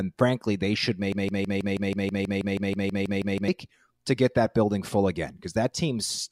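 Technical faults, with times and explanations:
1.12–3.48 s, broken-record loop: after "frankly they should", one 0.16 s fragment repeats identically 15 times until "to get that building", likely from a stalled stream resending its last piece. Unlike echo, the copies never decay, and the speech meant for that span is lost.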